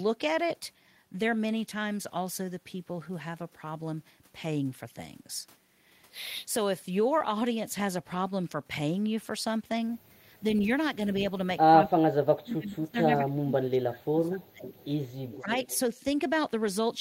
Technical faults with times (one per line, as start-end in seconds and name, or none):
10.61-10.65 echo leak
11.84-14.66 speech suppressed in double talk
14.65-14.85 echo leak
15.31-15.79 echo leak
15.40-15.51 speech suppressed in double talk